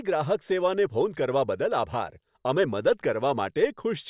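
No technical faults can be heard anywhere in the recording; the speech signal stays continuous and steady throughout.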